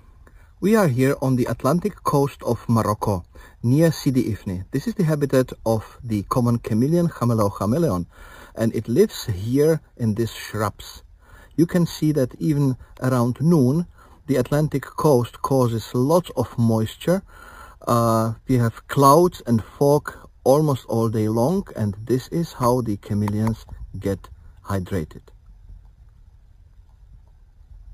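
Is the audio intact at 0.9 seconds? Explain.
No. At 0.9 seconds, as throughout, a bright metallic fizz follows the sound, with its lowest mirror copy at 5.5 to 11 kHz, about 22 dB below the signal. This is imaging from sample-and-hold upsampling: samples were repeated without smoothing, which fits a rate of about 11 kHz raised to 44.1 kHz.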